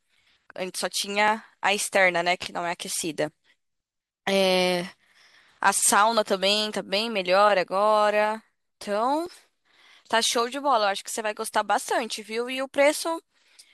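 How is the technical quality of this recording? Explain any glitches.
Two brief glitches affect the speech, both caused by overlap between stream segments. At 1.28 s and 9.26 s, the time stamps of neighbouring segments overlapped, which fits 2-second segments. The player trimmed sound that was never actually doubled, so a sliver of audio vanishes and the waveform jumps, heard as a short click or tiny skip.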